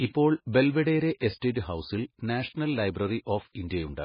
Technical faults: MP3 compression

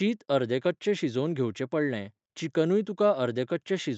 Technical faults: none

